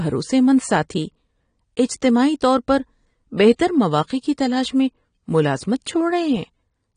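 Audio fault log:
Throughout: AAC compression, likely; speech sounds dull and warbling, and a spectrogram shows an empty band above 9.7 kHz, fitting a bitrate near 32 kbps.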